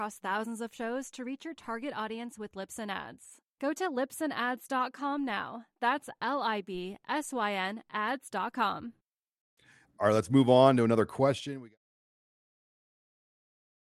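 No technical faults are present in this speech recording; the only level change is a smooth, deliberate fade-out starting at roughly 11 s and reaching silence at 11.78 s, with no click or hard edge.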